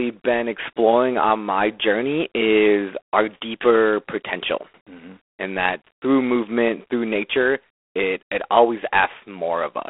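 Speech throughout has a harsh, rasping hiss that rises and falls with its level. That is G.726 ADPCM damage, fitting 24 kbit/s. Nothing passes above 3.8 kHz.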